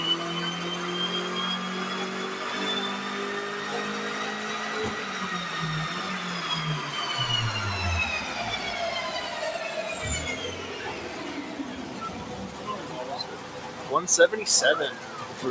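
A noise suppressor applied to music or sounds runs throughout the clip. A processor built for speech treats sustained tones, ambience and reverberant tails as noise and lowers them, while onsets pass. The level swings by around 5 dB, and the audio sits within a wideband call band with nothing above 8 kHz.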